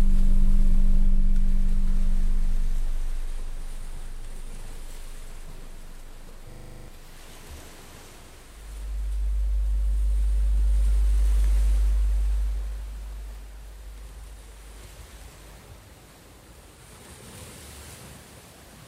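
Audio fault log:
6.52 to 6.88 s, system hang loop: the same 40 ms of audio repeats exactly nine times at 25 Hz, a brief rasping buzz as the hardware replays its ring buffer during a freeze. Unlike a dropout, it loops the same audio rather than going silent, and about 0.4 s of real audio is lost.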